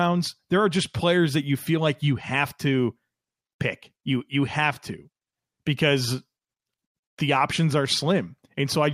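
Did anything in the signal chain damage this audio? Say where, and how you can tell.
No, nothing in the signal chain damaged this audio.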